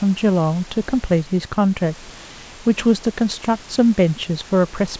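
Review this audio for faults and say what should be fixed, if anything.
No faults found; nothing to fix.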